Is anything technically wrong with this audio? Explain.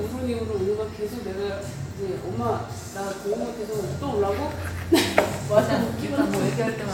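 No, nothing technically wrong stands out here; it's just the sound as it was captured, with nothing to flag.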